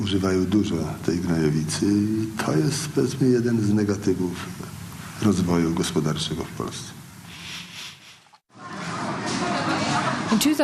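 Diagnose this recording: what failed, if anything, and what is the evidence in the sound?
A jitter buffer slow-down occurs from 7.03 to 7.85 s, in the network receive stage. The buffer ran low or had raised its target delay, so it repeated single pitch periods or bits of pauses. This adds 51 ms, and the passage plays at 95% speed with the pitch unchanged.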